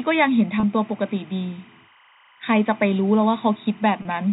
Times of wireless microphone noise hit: none

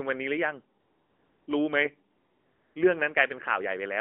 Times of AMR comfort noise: 0.80-1.48, 2.16-2.76

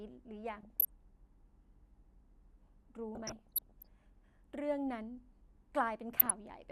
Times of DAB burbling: 0.55-0.89, 3.15-3.87, 6.14-6.31

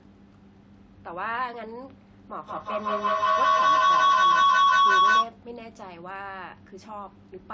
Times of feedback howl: 2.37-5.41

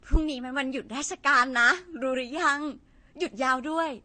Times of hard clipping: 0.14

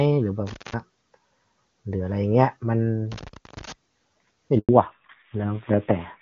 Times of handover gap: 4.59-4.69

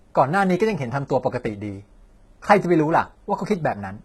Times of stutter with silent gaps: none

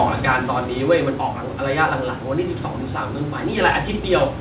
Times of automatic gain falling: 0.05-1.27

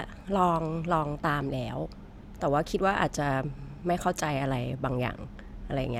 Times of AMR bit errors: none

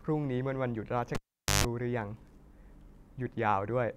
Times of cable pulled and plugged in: 1.15-1.65

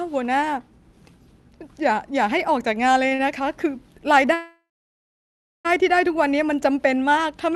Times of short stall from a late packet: 3.08-3.20

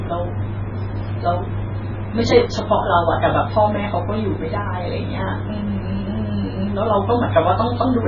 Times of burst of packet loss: none

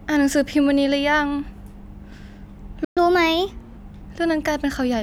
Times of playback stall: 2.84-2.97

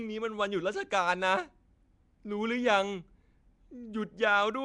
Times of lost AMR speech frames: none

